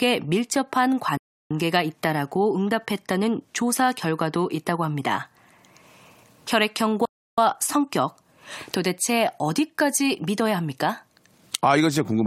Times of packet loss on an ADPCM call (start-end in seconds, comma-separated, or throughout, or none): none